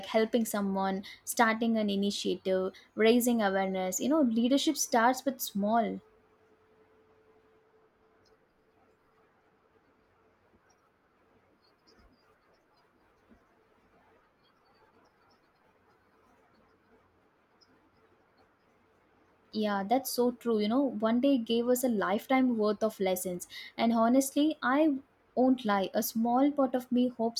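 Speech, with no audible faults.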